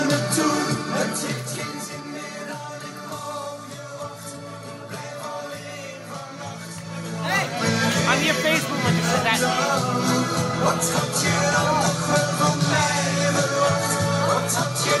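Zipper noise appears from 0.77 to 2.01 s, as the level drops by roughly 15 dB. It returns from 6.81 to 7.6 s as the level rises by a similar amount. Each move is made in 2 dB steps without smoothing. The steps come several to ten times a second, and each leaves a small click, heard as ticking over the sound.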